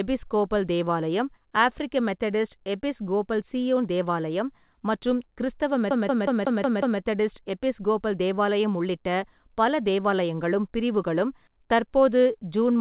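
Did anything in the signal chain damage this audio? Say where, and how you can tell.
Yes, at playback: a CD stuck on one turn from 5.91 to 7.00 s. A 183 ms slice repeats six times with short mutes, as the laser jumps back a track.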